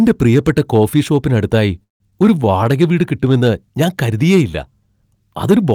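Hard clipping runs through the whole speech clip. It's driven about 6 dB past what the chain can pass, so the peaks get sheared flat on around one percent of samples. That adds high harmonics, which you hear as a gritty crackle on the louder syllables.

Right after "പ്രിയപ്പെട്ട കോഫി ഷോപ്പിന് അടുത്തായി" there's a call audio freeze from 1.83 to 2.02 s. Packets were likely held up and the jitter buffer ran dry, so the receiver filled 167 ms. Most of that, about 150 ms, is dead silence. Nothing is lost; the speech just resumes late.

Then at 2.10 to 2.13 s there's a skip ahead. Roughly a tenth of a second of audio is dropped and the two sides are spliced together almost directly. You hear it as a small jump, with the fragment in between missing.

Finally, from 2.26 to 2.83 s, leading into "വീട് കിട്ടുമെന്ന് ഞാൻ കരുതിയേയില്ല", there's a jitter buffer slow-down. The buffer rebuilds its reserve by repeating single pitch periods, adding 88 ms. 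The speech plays at about 86% speed with the pitch unchanged, so the sounds come out slightly drawn out.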